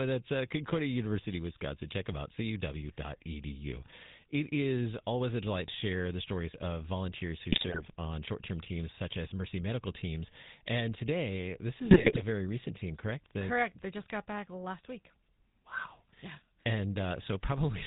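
From start to finish the speech carries the GSM full-rate codec's buzzy, gravelly roughness. The codec rebuilds the voice from a vocal-tract filter driven by coarse pulses, which fits 13 kbps GSM. Nothing passes above 4 kHz, and unlike plain band-limiting, the grit sits inside the voice itself.

GSM bit errors strike from 7.52 to 7.87 s, between "stories of volunteers who" and "on short term teams", and again from 11.85 to 12.23 s, between "today this" and "very recent team correct". Corrupted filter, pitch and gain values make the decoder squawk, pop and gargle.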